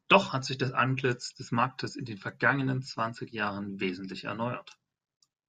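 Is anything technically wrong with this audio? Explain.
No technical faults are audible.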